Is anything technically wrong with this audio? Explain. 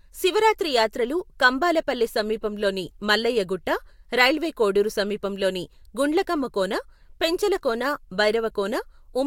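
No, nothing technically wrong can be heard in this speech recording; the signal stays intact and steady throughout.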